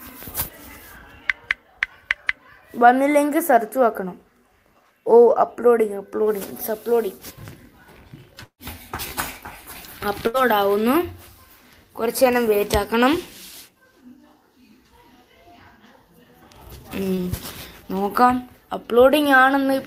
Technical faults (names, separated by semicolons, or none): long network dropout; burst of packet loss; short concealed packet loss